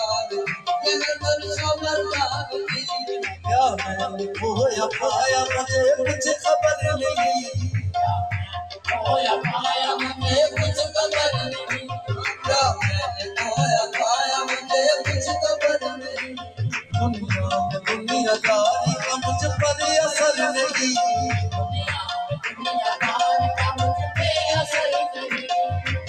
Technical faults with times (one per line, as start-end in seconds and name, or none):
0.00-26.08 noise suppressor applied to music or sounds
1.16-1.47 sound cut by the noise suppressor
3.28-3.46 sound cut by the noise suppressor
8.46-8.88 sound cut by the noise suppressor
15.92-16.60 sound cut by the noise suppressor
22.46-22.62 sound cut by the noise suppressor